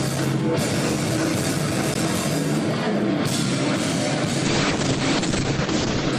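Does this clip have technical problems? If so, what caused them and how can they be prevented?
Yes. At 1.94 s there is a block of digital silence, about 12 ms of zeros with abrupt edges. It is a sharp tick rather than a smeared or concealed dropout, most likely because the output buffer was not filled in time. Give the audio thread more headroom, for example with a larger buffer, so it always meets its deadline.

From 4.45 s to the end, a call bitrate drop takes the encoding from 96 to 8 kbps and cuts the bandwidth from 20 kHz to 8 kHz. It stays at the lowest rate for about 1.7 s. Unlike a plain low-pass filter, it adds rough, watery coding artefacts as well as the muffling. Keep enough network headroom and limit congestion so the bandwidth estimate never collapses this far.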